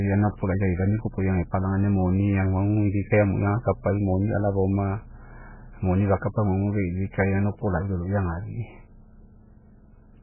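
MP3 compression throughout: heavy damage, likely from a bitrate near 8 kbps. Nothing above 3 kHz remains, and flickering weak frequency lines make the speech sound watery and swirly.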